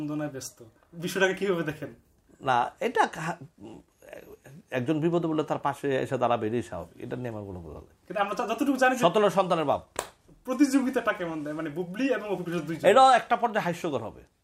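Nothing in this recording gives itself away as a technical fault, so there's really nothing to flag here.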